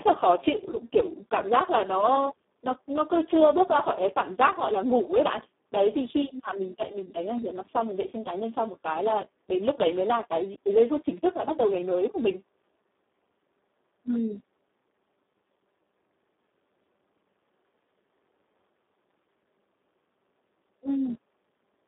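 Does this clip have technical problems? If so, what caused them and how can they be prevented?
Yes. Throughout, the speech passed through the Speex codec at a very low setting, which fits a bitrate near 4 kbps. Too few bits reach the excitation, so the sound turns hoarse, noisy and partly robotic, limited to about 250 Hz to 3.6 kHz with nothing above 3.8 kHz. Running Speex at a higher quality setting, or switching to a modern wideband codec, prevents this.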